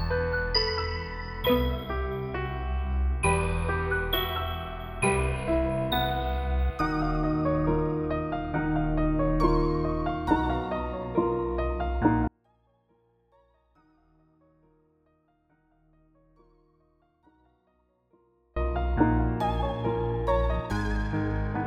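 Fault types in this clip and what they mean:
Audio dropout to a faint residue: the signal path likely lost its source for about 6.3 seconds while the chain after the break stayed live, so from 12.28 to 18.56 s the sound cuts abruptly to a faint sound roughly 40 dB below normal, then snaps back.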